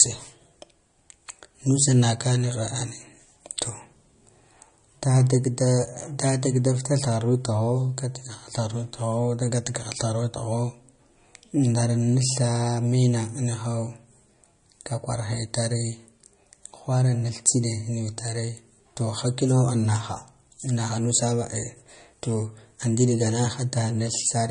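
From start to finish the speech has nothing above about 10.1 kHz, with a watery, swirling quality and smeared consonant attacks. This is likely MP3 compression at a low bitrate, roughly 40 kbps, where the encoder drops the treble and zeroes weak frequency lines from frame to frame.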